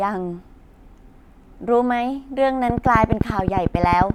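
From 2.70 to 4.11 s, regular ticking at 11.4 per second pokes well above the speech, a train of clicks likely from nearby equipment interference.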